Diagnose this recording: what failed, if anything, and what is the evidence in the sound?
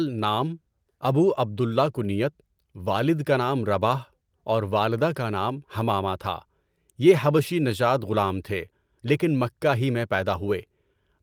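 Nothing in this speech recording points to a failure at any stage, so there's no diagnosis to give.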